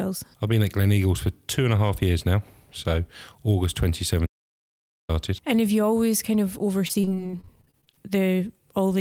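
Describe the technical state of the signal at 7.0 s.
At 7.0 s the speech is inside a run of repeated packet loss, from 6.87 to 7.99 s. Seventeen short gaps, none longer than 24 ms, are each patched by extending the preceding sound. About 30% of the stretch is concealed. The result is choppy, robotic speech.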